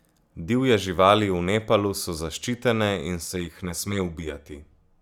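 From 3.27 s, just after "so zaščitene in", and continuing to the end, the speech takes on channel delay (comb filtering). One channel arrives around 10 ms behind the other, and when the two are summed to mono, the shared content cancels at regularly spaced frequencies. The first notch falls near 50 Hz, with further notches repeating every 100 Hz or so. The result is a hollow, phasey colouration with a fixed tonal character.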